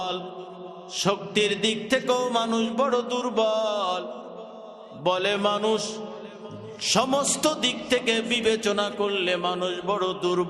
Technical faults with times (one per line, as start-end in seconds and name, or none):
none